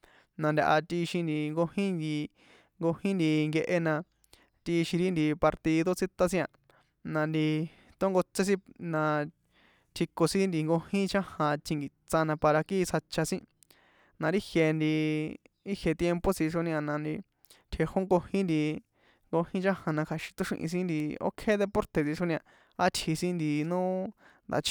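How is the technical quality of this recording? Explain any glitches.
The recording has one glitch, a short burst of CD scratch ticks near the end. From 21.0 to 21.35 s, three ticks interrupt the speech, roughly a sixth of a second apart. A scratch on the disc destroyed data beyond what error correction could repair, once per rotation. The player patched each gap, leaving clicks, the longest about a millisecond.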